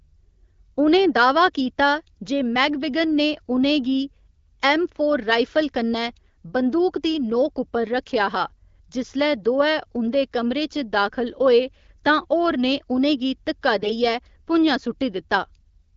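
From 13.78 to 13.92 s, AMR bit errors make the speech briefly hoarse and gargly. A handful of corrupted frames, roughly several percent of bits, misplace excitation pulses while pitch and level hold.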